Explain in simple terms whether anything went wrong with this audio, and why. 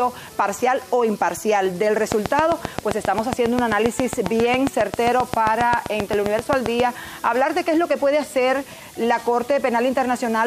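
A train of clicks runs from 2.12 to 6.81 s: about 40 steady ticks, 7.5 per second. Likely electrical interference or a faulty connection or power supply.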